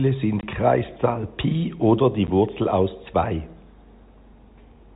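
Telephone-band speech carried over G.711, with nothing above 4 kHz. It has packet loss filled with silence at 0.41–0.43 s and around 2.27 s. Lost packets were replaced by 20 ms and 10 ms of digital silence, which fits 10 ms packets. The waveform shows flat-line gaps, and the spectrogram shows blank vertical slots bounded by hard edges.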